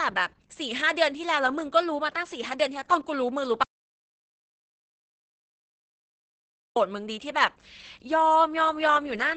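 A speech clip, heavily damaged by Opus voice compression throughout. Nothing is present above about 8.8 kHz, so the sound is wideband but dull. The voice is muffled, hoarse and slightly robotic. This points to the SILK speech coder running near 10 kbps, with coarse excitation coding. An audio dropout to silence runs from 3.63 to 6.76 s, about 3.1 s. The sound cuts off mid-flow and returns abruptly. The gap is digital silence with no room tone, likely from the input being lost while recording continued.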